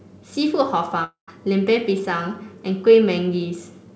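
At 1.04 to 1.29 s the speech dissolves into a fading buzz, then 120 ms of silence, and resumes with a quarter second missing. This is likely a long network dropout: the concealment gives out before the audio returns, which a brief packet loss would not do.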